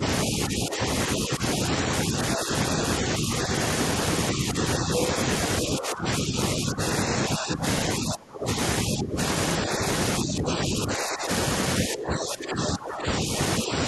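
From 0.0 to 3.52 s and from 4.32 to 5.02 s the speech sinks in patches, by about 5 dB. From 5.62 to 11.29 s and 11.86 to 13.84 s the dips deepen to about 15 dB. This is speech suppressed in double talk, likely an echo canceller turning the talker down while the far side spoke.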